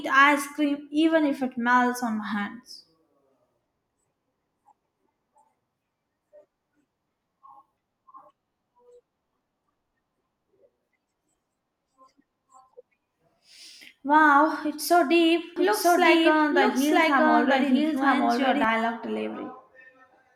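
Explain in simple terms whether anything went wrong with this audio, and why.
From 15.56 to 18.64 seconds, the speech suddenly gets a second copy of itself running about a second behind, just as loud as the original, so everything is heard twice and overlaps. The echo has no fade or room sound, and it appears and vanishes abruptly. This is a doubled audio track, likely caused by the same sound being picked up again through a slower route, or by an edit leaving two copies out of step.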